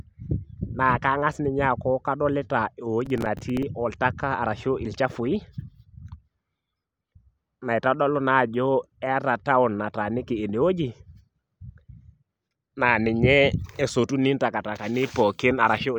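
Processor overload crackle runs from 3.06 to 3.63 s. The processor repeatedly missed its deadlines for very short buffers, a few milliseconds each, and a dozen or more across that stretch were filled with stale repeated audio, producing a gritty tearing over the speech.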